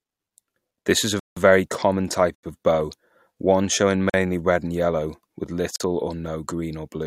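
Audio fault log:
1.20–1.37 s, 2.35–2.43 s, 4.10–4.14 s and 5.76–5.80 s, block of digital silence: the speech drops abruptly into dead silence and snaps back. The holes last 171, 85, 43 and 43 ms, so the first is heard as a clear gap and the last two as shorter holes. The lengths halve neatly, which fits the output missing whole buffers of 8192, 4096 and 2048 samples and writing zeros in their place, with no fade at either edge.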